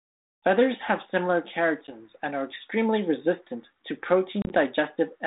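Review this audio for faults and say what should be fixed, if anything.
Packet loss on an ADPCM call drops out at 1.87 to 1.97 s (10 ms, about one packet) and at 4.42 to 4.54 s (50 ms scattered over 80 ms, longest gap 30 ms), leaving hard silent holes before the speech comes back slightly distorted while the decoder's predictor re-syncs. A jitter buffer with packet-loss concealment, or redundant packets on the call path, would fix it.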